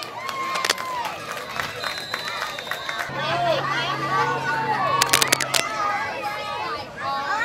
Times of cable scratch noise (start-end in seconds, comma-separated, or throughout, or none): 0.55-0.71, 5.01-5.71